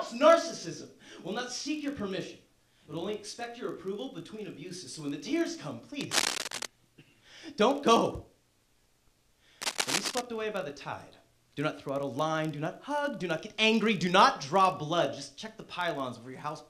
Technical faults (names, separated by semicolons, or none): filter restarted on every block; cable scratch noise